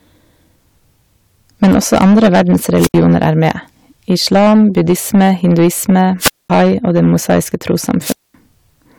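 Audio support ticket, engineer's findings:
Harsh fuzz riding every loud syllable, whole clip; crackle on speech peaks. Hard clipping: gain stage driven about 12 dB past full scale, a small share of samples flattened at the rails. Flat tops generate high harmonics heard as grit. Probable component: preamp or converter input gain.

Hiss swells, near-silent hole, speech returns, at 2.77–2.94 s (72 ms mute), 6.19–6.50 s (220 ms mute), 8.01–8.34 s (220 ms mute). Wireless microphone squelch dropout: FM carrier fading, so the receiver squelch gates the output. Probable component: RF link, whether antenna placement, range or body blocking.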